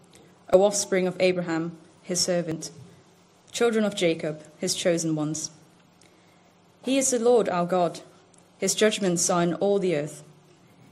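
Overlap between stream segments causes two tiny skips at 0.54 s and 2.52 s, about two seconds apart at the segment boundaries. A few milliseconds of audio are trimmed so the waveform jumps, with no silent gap like a dropout.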